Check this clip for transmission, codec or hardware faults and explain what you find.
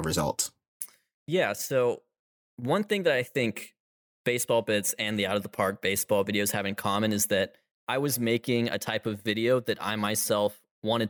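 Nothing in the transmission, codec or hardware path of this speech recording points to a fault; the signal holds steady and continuous throughout.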